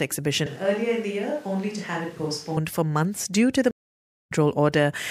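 From 0.46 to 2.57 s the speech turns hollow, roomy and about 5 dB quieter with more room noise, likely a switch to a distant microphone, ending abruptly before "for months due to". After "months due to the", a stream reconnect leaves 0.6 s of silence from 3.71 to 4.32 s. The speech then resumes roughly half a second further on, so unlike a plain dropout it skips ahead.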